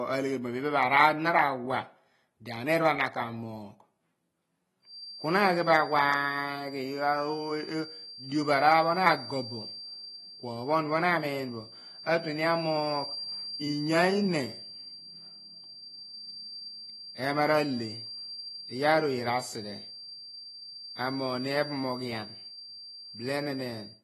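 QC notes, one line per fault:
Throughout, AAC compression: speech sounds dull and smeared with swirly artefacts and nothing above 12 kHz, likely from a low-bitrate encode of around 32 kbps.
4.81 s to end, feedback whistle: a thin 4.7 kHz tone that swells and fades slowly sits well below the speech, likely a speaker-to-microphone loop ringing just short of runaway.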